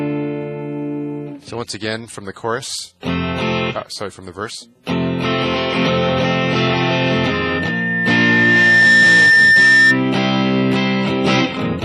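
A loudspeaker feedback squeal enters the audio at 6.57 s and runs until 10.0 s. A single tone at 1.8 kHz swells over about two seconds until it sits roughly 10 dB above the surrounding sound. The microphone is hearing the loudspeaker it feeds, and at 1.8 kHz the loop gain tops unity, so that frequency reinforces itself on each pass. The squeal stops only when the loop is broken.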